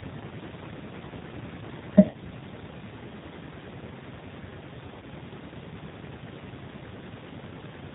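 Throughout, a G.729 codec, at a rate that fits 8 kbit/s, rebuilds the speech from a filter and sparse pulses and removes everything above 4 kHz, so it sounds plainly rough and synthetic. At 2.10 to 2.17 s, VoIP packet loss concealed by the speech codec forces the decoder to invent about 40 ms, consistent with two lost packets, from its last pitch and filter, producing a buzzy tone or coloured noise that fades. At 5.00 to 5.04 s, a 20 ms gap, which fits a single lost packet, is smeared over in the same way.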